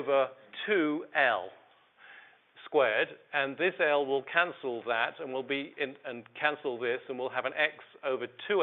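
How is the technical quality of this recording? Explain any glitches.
No glitches or faults heard.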